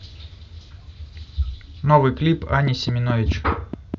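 From 2.67 s to 3.95 s a train of clicks runs over the speech: around seven sharp, near-identical ticks at a steady 4.7 per second, peaking roughly 10 dB above the speech, audible in the gaps too. The likely cause is electrical interference or a faulty connection or power supply injecting repeated pulses. On a waveform they stand out as evenly spaced narrow spikes; a spectrogram shows thin vertical lines spanning the full frequency range at regular intervals.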